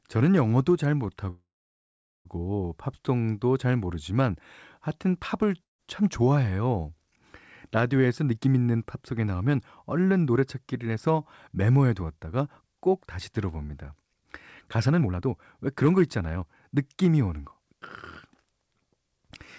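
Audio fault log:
1.30–2.27 s, call audio freeze: The sound stalls for about 0.95 s. A brief fading buzz gives way to about 0.82 s of silence. It then resumes exactly where it stopped, with nothing lost. The likely cause is delayed packets draining the jitter buffer, which inserts a gap.
5.63–5.81 s, long network dropout: The sound cuts out for about 0.16 s, mostly silence after a very short fading tail. When it returns, about 0.16 s of audio has been skipped. The likely cause is lost packets that were never played.
7.98–13.33 s, 14.77–15.33 s and 15.85–17.12 s, jitter buffer speed-up: The speech runs fast at unchanged pitch. It plays at 109% in the first and third stretches and sounds clearly hurried at 154% in the second. The receiver trimmed short pitch-period pieces to shrink an overfull buffer. Roughly half a second, 0.3 s and 0.15 s were removed.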